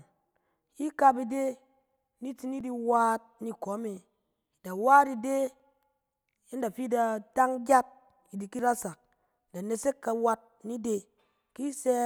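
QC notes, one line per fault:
2.61, 5.60, 8.59 and 11.59 s: audio missing between chunks. The recording or processing path likely handles the audio in 3-second chunks and loses a sliver of roughly 7 ms at each handover, then joins the two sides directly with no gap filled in. Each join is heard as a tiny skip in the speech, recurring every 3 s, where the waveform jumps and the sound lurches forward slightly.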